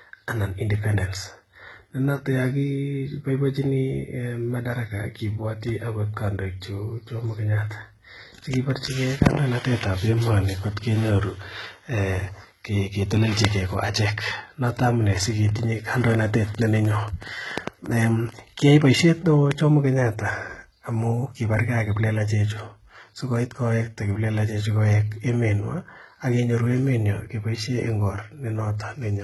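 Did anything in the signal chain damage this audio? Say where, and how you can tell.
Yes, in two places. The whole clip carries heavy codec damage that sounds like HE-AAC compression, most likely HE-AAC v2 at a very low bitrate, something like 16 kbps. Nothing survives above 11.8 kHz, and the treble that is there is rebuilt by spectral band replication: lower bands get copied upward under a coarse envelope. The harmonics don't line up across that crossover, so s sounds come out gritty and metallic instead of crisp.

Separately, there's a train of clicks from 15.23 s to 18.40 s, ending just before "kiayai boisiet". It's about six clicks per second at uneven spacing, around twenty in all, each much the same shape and poking a few dB above the speech. That sort of repeated pulse most likely comes in on the analogue side, through interference from nearby gear, a bad connection, or a flaky power supply. 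It ticks through the pauses as well as the speech.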